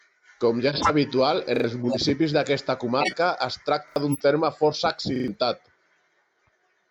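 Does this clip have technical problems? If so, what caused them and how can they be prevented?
Yes. There are four corrupt frame decoded faults, at 0.68 to 0.91 s, 1.83 to 1.97 s, 3.00 to 3.14 s and 4.07 to 4.23 s. Each is a short chirpy burst of noise. Damaged compressed frames were decoded anyway, so energy landed at wrong frequencies. The first and third are loudest. Error checking with frame concealment, or stronger channel protection, would prevent this.

There are three repeated buffer stutters, at 1.56 to 1.64 s, 3.88 to 3.96 s and 5.16 to 5.28 s. A short slice repeats with hard joins, twice at the first two and three times at the last. The repeat length fits a 40 ms buffer. New audio arrived late, so the device replayed old audio, and roughly 70 to 100 ms of sound was lost each time. A larger playback buffer or steadier scheduling would prevent this.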